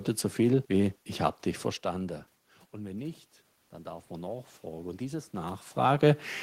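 Speech clip, and the thing to listen for is automatic gain rising, starting right after "wenn nicht dann" at 3.82 s and running to 6.31 s. The input level drops by about 16 dB there, so the AGC decides things have gone too quiet and slowly pushes its gain up by about 5 dB. You hear the voice and the room noise swell together over those two and a half seconds, which is how you can tell it's the gain and not the talker shifting position.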